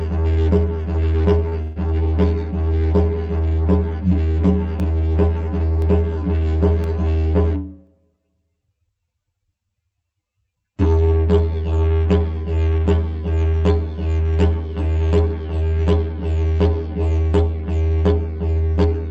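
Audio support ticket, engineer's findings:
Short stall from a late packet, 1.49–1.54 s: sound held about 24 ms too long with a slight buzz or dip, then continues from the same point, nothing skipped. Jitter buffer ran dry briefly. Unlike the freeze that follows, much shorter.

Call audio freeze, 1.62–1.78 s: last sound carried on as a fading buzz or hiss for about 141 ms, never reaching silence, then resumes where it stopped with nothing lost. Likely packets held up in transit, jitter buffer empty. Longer and more drawn-out than the 1.49 s stall.

Periodic USB or driver dropouts, 4.80–9.92 s: regular ticks roughly every 1.024 s, about seven in all, each a ~1 ms silent gap. Bus or driver blocked on a fixed timer. Distinguished from network faults by the exact spacing and by nothing being stretched. Separate from the call path, whose top end stops near 8 kHz, consistent with Opus around 64 kbps.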